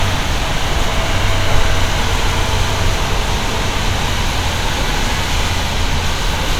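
Everyday sound, with no technical faults to report.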